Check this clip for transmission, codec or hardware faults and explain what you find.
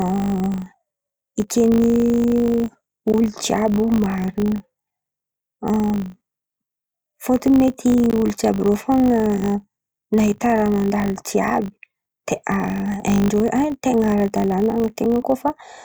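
One fault runs through the whole speech clip: a filter restarted on every block. A filter in the processing chain is losing its internal state at each block boundary and starting again from silence. Every block therefore opens with a brief transient as the filter settles. These arrive 50 times a second, consistent with blocks of about 20 ms, and merge into a steady 50 Hz buzz that rises and falls with the level of the speech, loudest on strong syllables and fading in pauses.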